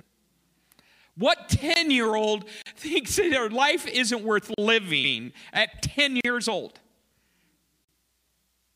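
At 1.74 s (about 21 ms), 2.62 to 2.66 s between "year old" and "thinks that their life", and 4.54 to 4.58 s after "their life isn't worth", blocks of digital silence cut the sound out with no fade. Each is heard as a short hole and shows as a flat line in the waveform and a blank vertical strip on the spectrogram. At 5.03 to 5.14 s, also after "their life isn't worth", repeated frames replay a 104.5 ms stretch once, which fits a run of four codec frames. This produces a stutter, an identical pattern side by side on the spectrogram, and about 0.1 s of added length. Further 40 ms silences follow at 6.21 to 6.25 s and 7.85 to 7.89 s.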